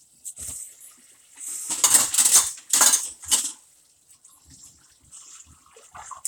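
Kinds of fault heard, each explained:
No technical faults are audible anywhere in the recording of sounds.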